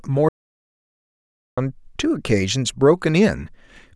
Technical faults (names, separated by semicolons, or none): audio dropout to silence